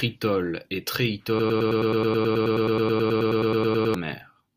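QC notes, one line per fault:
1.39–3.94 s: broken-record loop. A 107 ms fragment repeats identically 24 times, likely from stalled playback. Unlike echo, nothing new plays underneath, and the underlying audio is lost.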